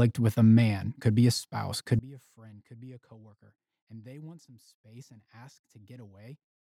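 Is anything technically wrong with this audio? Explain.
Yes. From 1.99 s to the end, the speech suddenly drops by about 26 dB and becomes a faint remnant. The likely cause is one channel inverted: one side of the stereo pair has its polarity flipped, so when the two channels are summed to mono, everything they share cancels. The centred speech and its low end nearly disappear, leaving only the small differences between the channels as a weak trace.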